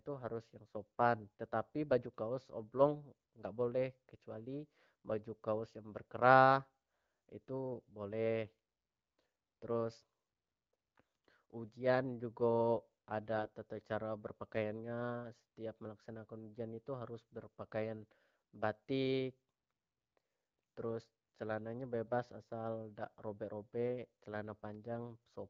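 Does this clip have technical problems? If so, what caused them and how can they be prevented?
Yes. From 13.34 to 13.52 s the speech turns hoarse and gargly while keeping its pitch and level. These are AMR bit errors: corrupted low-priority bits in the AMR wideband stream misplace excitation pulses and skew gain and spectral values. The span fits about eight 20 ms frames at an error rate of several percent. Stronger channel coding on the radio link, or discarding and concealing frames that show residual errors, would prevent it.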